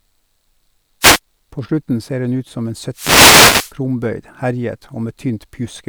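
A short swish of static comes in from 1.01 to 1.19 s, and a longer burst from 2.92 to 3.74 s. These are wireless microphone noise hits: the analogue FM radio link faded as reflections cancelled, letting receiver noise rise over the signal.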